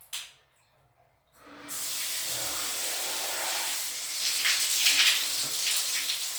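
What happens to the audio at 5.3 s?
At 5.3 s the audio carries the same plainly audible Bluetooth LC3 compression heard from start to finish, with a grainy, breathy coarseness on the upper detail. The likely cause is LC3 coding, which fits a rate near 48 kbps and 10 ms frames. The codec discards much of the fine high-frequency content in each frame and substitutes shaped noise, which produces that rough texture. Nothing is present above about 20.2 kHz.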